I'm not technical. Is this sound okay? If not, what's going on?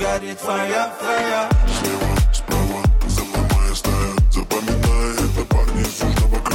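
Yes, this one's fine: nothing in it sounds broken or off, so there's nothing you need to worry about.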